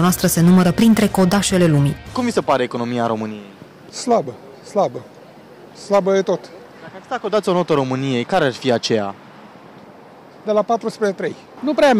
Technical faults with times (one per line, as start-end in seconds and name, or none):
0.00-12.00 hard clipping